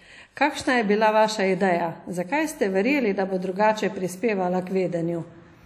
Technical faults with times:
0.00-5.65 WMA compression

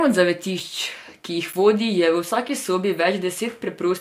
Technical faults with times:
0.60 block of digital silence
1.53 block of digital silence
2.49 block of digital silence

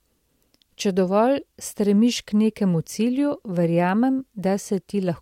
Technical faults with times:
none

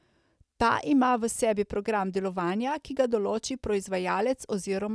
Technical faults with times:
none

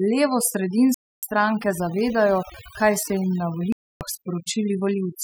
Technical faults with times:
0.00-5.23 overdone noise removal
0.94-1.23 Bluetooth dropout
3.72-4.01 Bluetooth dropout

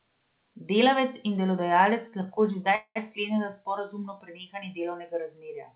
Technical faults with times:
2.08-2.28 short stall from a late packet
2.75-2.97 call audio freeze

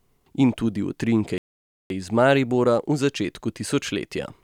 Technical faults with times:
1.38-1.90 playback stall

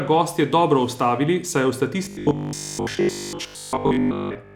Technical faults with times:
2.05-4.55 robotic sound from repeated short buffers

